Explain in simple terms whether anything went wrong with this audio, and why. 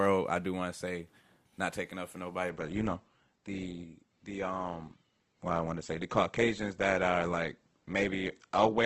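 Adaptive stream at a lower bitrate, from 2.50 s to the end: right after "taking up for nobody" the stream switched to a lower-quality version, likely because the connection slowed. The treble above 8.2 kHz vanishes and the speech turns duller and more artificial, with no gap.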